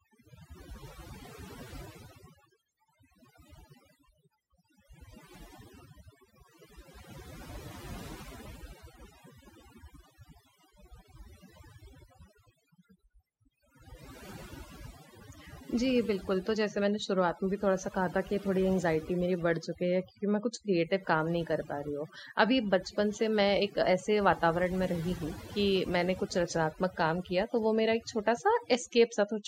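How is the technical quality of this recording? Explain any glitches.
The recording has one fault throughout: overdone noise removal, present from start to finish. The noise reduction was set so aggressively that it switches off frequency bands it takes for noise, along with quiet parts of the speech. The background drops and breaks up into twinkling specks.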